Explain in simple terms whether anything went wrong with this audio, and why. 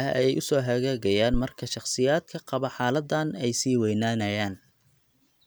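A single deep, dull thump interrupts the speech at about 1.34 seconds and dies away by 1.42 seconds, fading very quickly rather than ringing on. This is a phantom power thump. The microphone's power supply was switched on or off while the input was live, and that sudden jump in voltage passed through the equipment as one low, heavy knock before things settled again.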